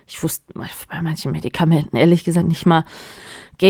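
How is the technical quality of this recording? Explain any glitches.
No technical glitches can be heard in this recording.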